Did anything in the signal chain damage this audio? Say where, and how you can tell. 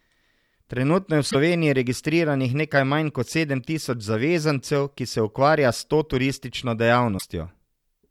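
Yes: damaged data in a compressed stream, at the codec stage, at 1.27–1.35 s (between "je v" and "registriranih nekaj manj kot") and 7.15–7.24 s (after "to turistično"). Each short glitch marks corrupted frames that the decoder misread, losing sync until it found the next frame header.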